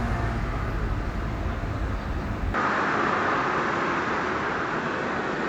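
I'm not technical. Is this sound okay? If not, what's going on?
No. From 2.54 s to the end, the sound abruptly turns duller and boxier, with nothing above about 7.7 kHz, a slight shift in loudness and a faint new background hiss. This is likely an input switched to a poorer device. A simple quality drop wouldn't also change the background noise, and there's no gap at the switch.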